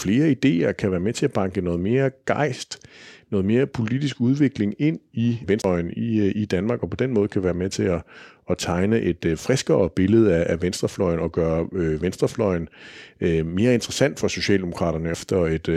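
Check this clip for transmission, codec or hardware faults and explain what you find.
Two CD skips occur in this speech. The first runs from 5.62 to 5.64 s, right after "politisk udvikling ind i" and before "i øh i", with a mute of around 20 ms. The second is at 15.14 s, a mute of only a couple of milliseconds. In each, a shock or disc flaw threw the laser onto another turn of the spiral, so playback briefly cuts out with a tick and resumes a disc revolution or more away. Unlike a network dropout, the flow of speech jumps position instead of merely pausing.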